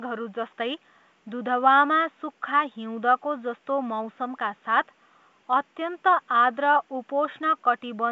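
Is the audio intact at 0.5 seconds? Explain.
Yes, the audio is intact at 0.5 seconds, with no fault at that moment.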